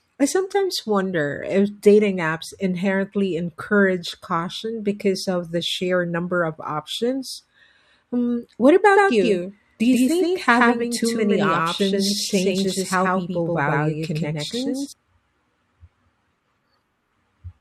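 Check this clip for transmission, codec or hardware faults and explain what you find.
One fault: a doubled audio track from 8.94 s to 14.92 s. A second, full-band copy of the speech, about as loud as the original, trails it by roughly 150 ms, likely from an edit holding two out-of-step copies or a slower capture path. It sounds like a dry slapback echo that cuts in and out abruptly. The waveform shows each burst repeated, and the spectrogram shows every onset smeared into a shifted duplicate.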